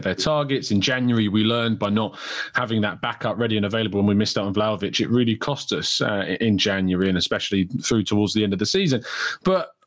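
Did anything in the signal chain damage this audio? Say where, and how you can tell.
Yes. Gain pumping runs throughout. The gain swings about 15 dB, likely from excessive input gain driving a fast limiter.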